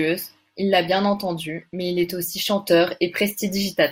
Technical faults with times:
0.91-2.19 Bluetooth SBC bit pool drop

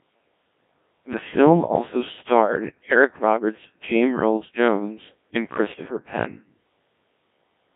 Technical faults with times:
0.00-7.76 Codec 2 vocoder

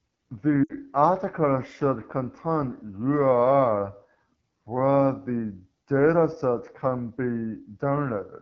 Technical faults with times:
0.00-8.41 AMR wideband (HD Voice) codec
0.64-0.72 lost AMR speech frames

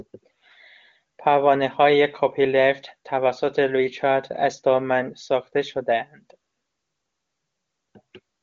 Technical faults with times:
none

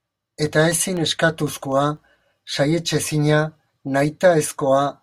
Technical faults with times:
0.22-2.47 periodic USB or driver dropouts

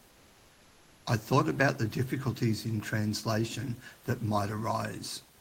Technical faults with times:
0.00-1.05 comfort noise in place of the background

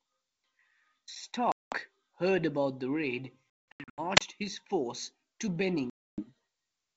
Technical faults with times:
1.52-1.76 packet loss on an ADPCM call
3.71-4.01 packet loss on an ADPCM call
4.15-4.21 wireless microphone squelch dropout
5.90-6.24 packet loss on an ADPCM call

